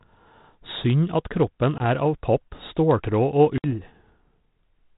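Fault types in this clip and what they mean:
Packet loss on an ADPCM call: hard-edged silent gaps, about 20 ms near 1.8 s and 60 ms near 3.6 s, after which the speech returns slightly distorted. Lost packets became silence, pushing the G.726 decoder's predictor and step size out of step.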